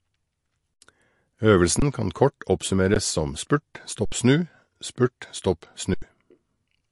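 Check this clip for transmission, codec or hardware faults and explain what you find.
Two things show up: a codec problem across the whole clip, and a run of short dropouts.

MP3 compression runs throughout. The speech sounds watery and a bit swirly, with nothing above about 11.3 kHz, so the top end is cut off flat. That points to a low-bitrate encode, which fits something around 48 kbps. The most likely cause is an MP3 encoder that ran short of bits, chopped the treble and dropped quieter frequency detail frame by frame.

The underrun with held sample happens five times: 0.74–0.82 s, 1.80–1.82 s, once at 2.94 s just before "som spurt", 4.05–4.12 s right after "som spurt", and 5.94–6.02 s. Each time the output buffer ran dry and the converter froze on its last value, so the sound just flatlines rather than clicking in. Live audio kept moving during each hold, somewhere around 15 to 70 ms of it.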